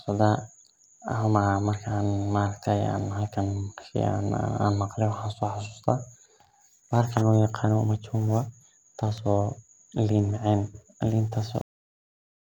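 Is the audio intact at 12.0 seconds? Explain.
No. At 12.0 s the speech has already been lost to a cut-off end, which runs from 11.61 s to the end of the clip at about 12.5 s. The final stretch of audio was never written out or played, so the speech halts abruptly mid-sound at 11.61 s and falls straight into digital silence with no natural decay. On a waveform, the trace snaps to a flat line; on a spectrogram, all energy ends in a sharp vertical edge, followed by blank space.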